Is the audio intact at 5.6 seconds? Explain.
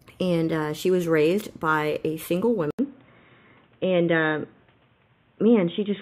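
No. From 2.71 s to the end, the input switched to a poorer device, likely another microphone or a headset's call profile. After an 80 ms gap, the speech loses everything above 3.8 kHz and turns dull and boxy over a faint new noise floor, at unchanged loudness.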